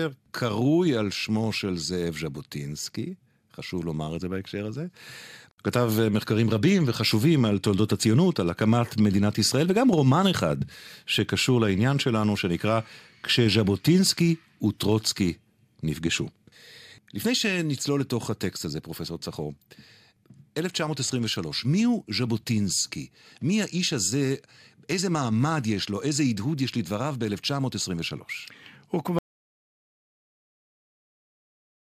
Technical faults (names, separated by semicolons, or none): audio dropout to silence